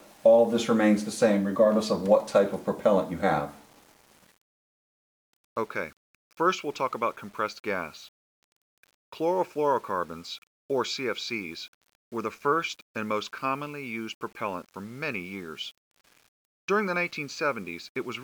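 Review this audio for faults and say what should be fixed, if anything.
Low bit depth without dither runs through the whole clip. Quiet passages turn grainy, and the grain rises and falls with the sound, sitting roughly 35 dB below the signal. The likely cause is requantisation to about 8 bits by plain rounding, so the error tracks the waveform as distortion. Prevent it by keeping at least 16 bits and applying dither before any word-length reduction.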